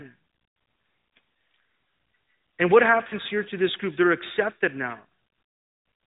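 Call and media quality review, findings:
Lost AMR speech frame at 3.08 to 3.14 s, just before "here to this group". Brief dip or warble. Decoder concealed one 20 ms frame by repeating the last good parameters at reduced gain. Band-limited AMR narrowband sound throughout, nothing above 4 kHz.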